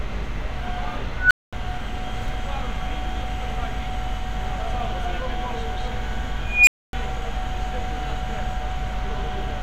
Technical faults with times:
1.17-1.53 unstable filter
6.46-6.93 unstable filter

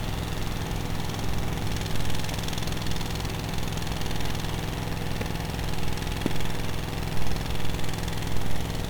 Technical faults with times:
0.00-8.90 1-bit DFPWM compression
5.21-5.24 loud pop
6.26-6.28 loud pop

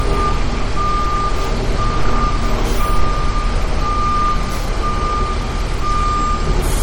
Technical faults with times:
0.00-6.83 MP3 compression

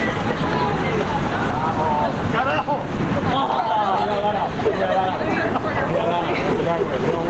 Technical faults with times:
0.00-7.30 gain pumping

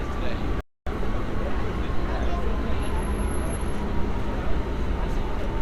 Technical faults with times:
0.61-0.87 rebuffering stall

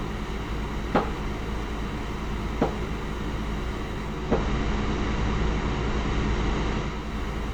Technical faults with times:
4.02-7.20 digital radio blending to analogue

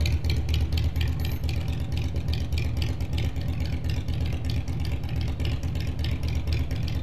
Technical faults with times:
none

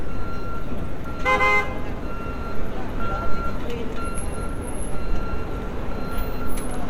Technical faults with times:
4.88 dropped samples

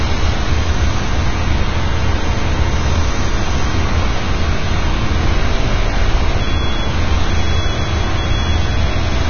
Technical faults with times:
0.00-9.29 Vorbis compression

